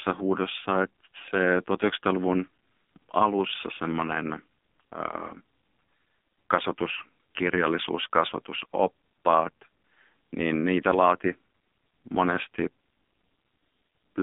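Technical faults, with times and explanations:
Throughout, AMR narrowband mobile codec: speech squeezed into a 200 Hz to 3.6 kHz band at what sounds like 5.9 kbps, so it's heavily buzzy and synthetic, nothing above 3.7 kHz.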